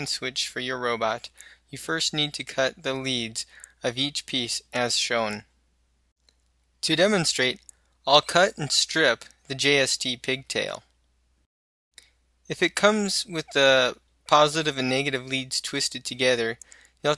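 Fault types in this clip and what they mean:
No audible faults turn up anywhere in this recording.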